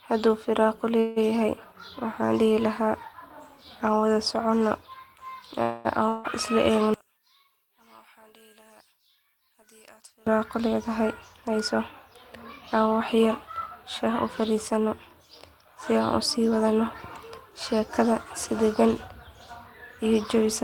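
A call audio freeze occurs at 0.99 to 1.18 s, and again at 5.62 to 5.87 s. The likely cause is packets held up in transit that left the jitter buffer empty. Each time, the receiver stretches the last bit of speech into a fading buzz, for about 170 ms and then about 220 ms. The speech then picks up exactly where it stopped, so nothing is lost, but each pause pushes everything after it later.

A long network dropout follows at 6.09 to 6.26 s. The audio behaves like the freezes at first: the last sound smears into a buzz for about 155 ms and fades without reaching silence. The difference is what happens when the speech returns. It resumes further along, with about 160 ms of it skipped, most likely because a run of packets never arrived at all.

One channel inverted runs from 6.94 to 10.27 s. One side of the stereo pair has likely had its polarity flipped. When the two channels are combined to mono, the centred speech cancels and drops by about 30 dB. 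What remains is a faint residue made of whatever differs between the channels, so the speech seems to recede almost to nothing and then snaps back to full level.

Jitter buffer speed-up appears four times, at 10.60 to 11.75 s, 14.05 to 14.87 s, 15.93 to 16.81 s and 17.73 to 18.52 s. The playback rate rises to 105%, 107%, 107% and 105% respectively. The receiver is trimming a backlog of queued audio by cutting out many tiny pitch-period slices: around 70 ms in each of the first three stretches and about 50 ms in the last. The pitch stays the same, but the speech sounds rushed.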